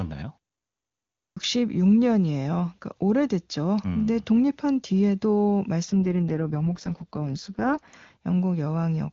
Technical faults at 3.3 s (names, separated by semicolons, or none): none